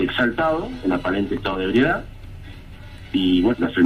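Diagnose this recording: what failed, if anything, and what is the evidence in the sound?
At the codec stage, compressed frames were skipped: several whole frames, on the order of seven, were either absent from the stream or rejected by the decoder. Around 3.53 to 3.55 s the sound lurches forward by roughly 150 ms.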